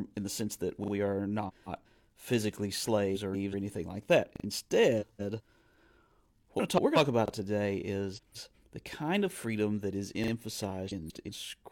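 Just after "in the sense that", at 0.84 s, a repeated buffer plays: a piece about 40 ms long sounds three times with hard joins, a quick stutter from playback reusing its last buffer when new audio came late. The size fits a 40 ms buffer. The same stutter returns at 4.36 s and 10.24 s, and once more at 7.28 s with a single extra repeat.

Frames out of order run from 1.48 to 1.87 s, 3.15 to 3.54 s (ending at "anything like that"), 5.01 to 5.41 s, 6.59 to 6.97 s, 8.16 to 8.55 s (between "about today" and "the kind of freedom") and 10.89 to 11.29 s. Each time, two neighbouring blocks of roughly 0.19 s arrived swapped and were decoded that way, which points to runs of four frames. The result is a garbled flutter.

What separates the two is that the stutters repeat the same tiny slice, while the swaps repeat nothing, lose no time and simply play a stretch in the wrong order.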